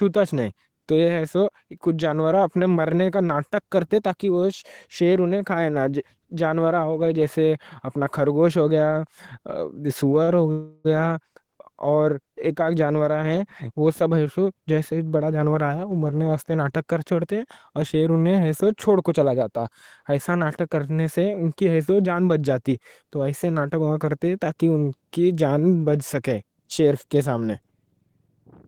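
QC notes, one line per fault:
10.23–10.30 s, short stall from a late packet: a sound is held about 42 ms too long, with a faint buzzy smear, because a late packet let the jitter buffer run dry and the receiver stretched the last sound until it came. A spectrogram shows harmonics frozen flat briefly; nothing is lost.
10.52–10.87 s, call audio freeze: the sound halts for 329 ms, its final moment drawn out as a buzz that fades but never reaches silence, then resumes exactly where it stopped. The likely cause is packets held up in transit emptying the jitter buffer. The waveform shows a decaying repetitive stretch; the spectrogram shows smeared, static bands.
14.02–16.29 s and 21.79–22.15 s, jitter buffer speed-up: after "ہی جانوراں ہیں وہ", running up to "ناٹک کر چھوڑتے اور", the speech runs 112% fast, about 0.3 s trimmed; after "کرنے سے ان کی" it runs 109%, a few tens of ms removed. The receiver cut pitch-period slices to shrink excess buffered delay, so pitch holds but delivery sounds hurried. 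Spectrograms show compressed syllable spacing with unchanged harmonic spacing.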